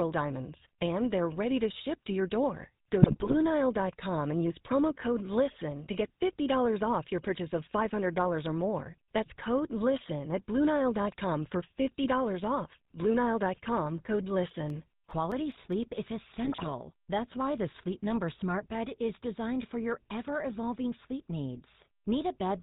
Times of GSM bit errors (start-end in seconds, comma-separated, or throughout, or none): 3.02-3.35, 16.44-16.72